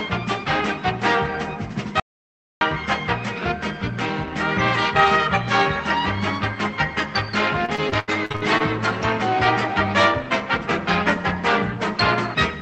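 From 2.00 to 2.61 s the sound cuts off into dead digital silence for about 0.61 s: an audio dropout to silence, likely from the input briefly disconnecting. Between 7.65 and 8.62 s, repeated packet loss makes the sound choppy and robotic, with holes up to about 79 ms patched by stretching earlier audio. Roughly a third of that stretch is concealed.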